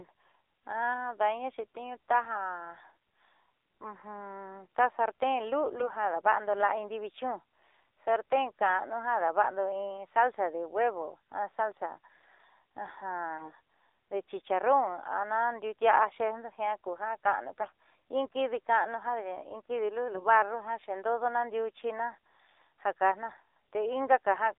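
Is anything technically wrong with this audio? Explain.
Yes. The whole speech clip has been through an AMR narrowband mobile codec, and its damage is plainly audible. The sound points to a low mode around 7.4 kbps, with the band held to roughly 300 Hz to 3.7 kHz. Few pulses per frame drive the vocal-tract model, so voices come out buzzy and synthetic, with nothing above the top of that band.

There are also AMR bit errors at 5.80–5.91 s, 13.37–13.55 s, 17.62–17.71 s and 20.14–20.23 s. Weakly protected bits flipped while the frame checks still passed, so pulses landed wrong and gain and spectrum values drifted. Pitch and level hold, but the sound goes hoarse and gargly, worst around 13.4 s.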